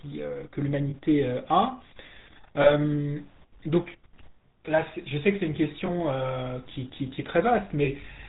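Throughout, the speech carries GSM full-rate codec damage, plainly audible as a buzzy, gravelly roughness. The coder rebuilds the voice from a vocal-tract filter driven by coarse pulse excitation, which fits the 13 kbps full-rate scheme. A spectrogram shows nothing above 4 kHz and smeared harmonics.

Lost GSM frames come at 0.90 s and 2.62 s, each about 40 ms, which fits two frames, then at 5.86 s and 7.84 s, each about 20 ms, pointing to one frame. The decoder repeats the last good frame, so each gap rings metallically, with a brief repeated pattern on the waveform.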